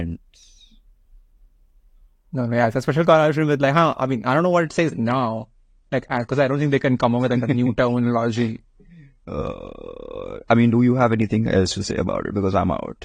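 A speech recording whose sound quality drops abruptly at 4.63 s and stays degraded to the end at 13.05 s, the signature of an adaptive stream at a lower bitrate. From that point nothing above 10 kHz survives, and compression artefacts thicken, which fits a switch from roughly 96 to 32 kbit/s AAC after the connection slowed. Unlike a dropout or packet loss, there is no gap or glitch, just a sudden, sustained loss of treble.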